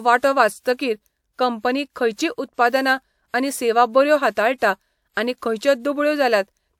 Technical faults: pre-echo

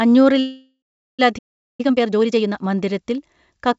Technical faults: call audio freeze; playback stall; time-compressed catch-up

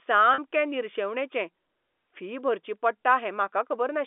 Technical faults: packet loss with pitch repetition

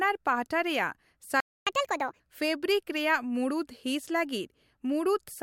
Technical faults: playback stall; catch-up at higher speed

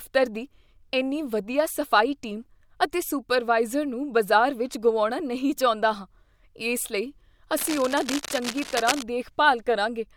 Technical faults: cable scratch noise

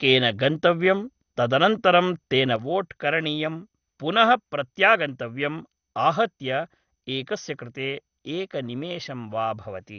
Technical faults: MP2 compression; sudden gain jump

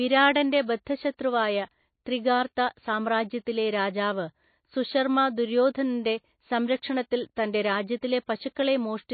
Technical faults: MP3 compression

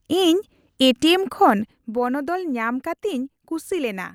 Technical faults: zipper noise

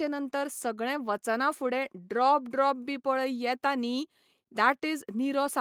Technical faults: none

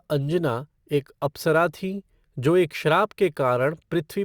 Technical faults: sample clock jitter

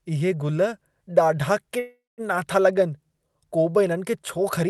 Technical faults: call audio freeze

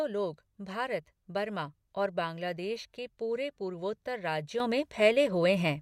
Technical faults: sudden gain jump

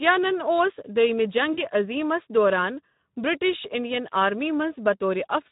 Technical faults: Speex codec; VoIP packet loss concealed by the speech codec

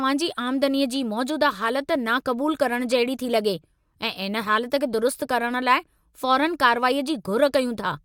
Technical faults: none

